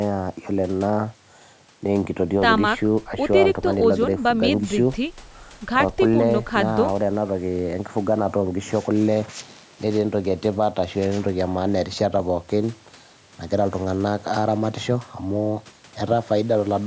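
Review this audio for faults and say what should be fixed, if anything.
Nothing in this speech recording needs fixing. The call microphone processing can be heard doing its normal job, trimming the lowest bass and leaving nothing above 8 kHz.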